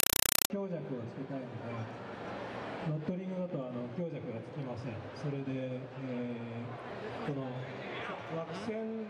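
From 0.0 to 0.5 s, compressed stream played as audio: undecoded AC-3 chatters as loud static, and the spectrogram shows 4 ms full-band bursts 31 times a second.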